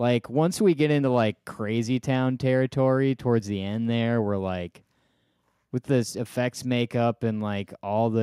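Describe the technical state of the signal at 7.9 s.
At 7.9 s the signal is intact, with no audible fault at that point in the speech.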